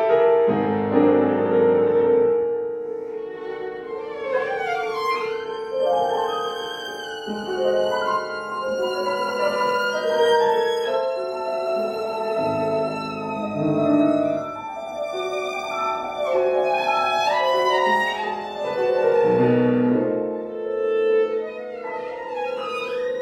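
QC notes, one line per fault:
No faults to note.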